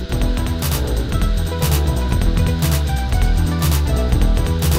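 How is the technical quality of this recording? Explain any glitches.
The recording has one clear technical fault, present for its whole length. Channel delay (doubling), throughout: one channel arrives about 93 ms late, which fits a 4096-sample buffer, and the mono sum plays both, giving an equal-level slap echo on every sound.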